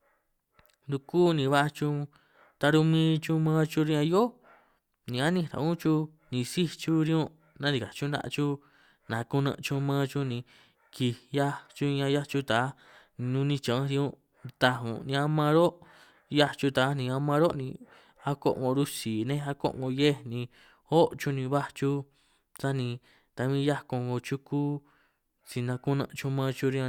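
Nothing in this speech recording stands out as a technical fault; it just runs along without a hitch.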